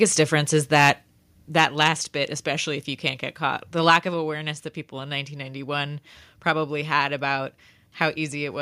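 From 0.75 to 0.9 s the loudest syllables take on a harsh, crackling edge, their peaks squared off. This is likely microphone overload: the input level ran about 5 dB past what the converter could represent, so a couple of percent of samples had their tops sheared flat. At 1.02 s the speech and the background fall together in one sudden step of about 3 dB. That is likely the microphone volume stepped down, with the call software cutting the input level in reaction to the distorted peak just before it.

The same pairing repeats. From 1.59 to 1.88 s the crackle returns, milder, from overload about 3 dB past full scale that likely flattens under one percent of samples. At 2.04 s comes another abrupt level drop of about 2 dB, likely a second step down in microphone volume. A brief gritty burst from 3.9 to 3.95 s, only about 1 dB over but still clipping a small fraction of samples, is likely overload again. 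At 4.14 s a further drop of about 2 dB follows, likely the third step down in input level.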